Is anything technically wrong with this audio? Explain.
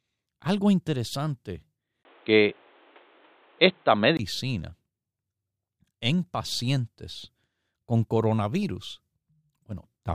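Yes. From 2.03 to 4.19 s, after "algo interesante", the input likely switched to a poorer device. A 20 ms gap and a cut above 4.1 kHz leave the speech dull, with a level shift and faint new background noise.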